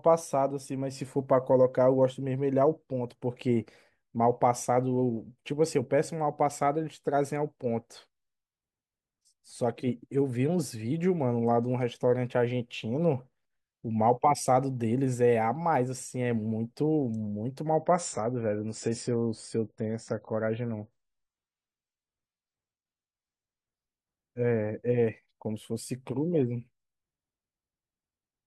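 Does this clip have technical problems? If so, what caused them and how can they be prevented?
Yes. From 17.69 s to 23.69 s the speech turns abruptly duller, with nothing above 9.7 kHz and smeared, warbly codec artefacts, then snaps back to full quality without any gap. This is an adaptive stream at a lower bitrate: the player dropped to a cheaper version of the same stream when throughput fell, and the sound points to a switch from roughly 96 to 24 kbit/s AAC. A larger playback buffer or a higher minimum bitrate rung prevents it.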